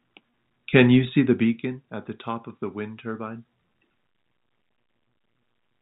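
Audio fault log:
1.06–1.84 s, zipper noise: the level drops by roughly 15 dB in coarse steps rather than a smooth glide, about 50 of them a second, and each unsmoothed jump leaves a tiny click that together form a fine ticking rasp riding on the speech, inside a band that stops at 4 kHz, as telephone-coded audio does. On a waveform the envelope descends as a staircase; a spectrogram shows faint, evenly spaced vertical lines across the band during the fade.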